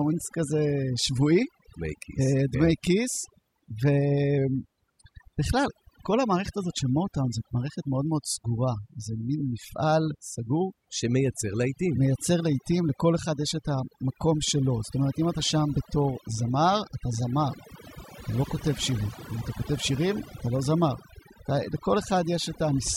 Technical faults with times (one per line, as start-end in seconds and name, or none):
0.00-22.96 overdone noise removal
4.38-5.12 drift correction step